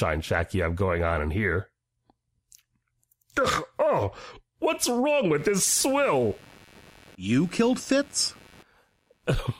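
From 5.37 s to 9.31 s a buzzing, chirping computer activity noise sits about 30 dB below the speech, pulsing at around 100 Hz as computer load disturbs the shared ground. A spectrogram shows evenly spaced vertical striations, unrelated to the speech energy.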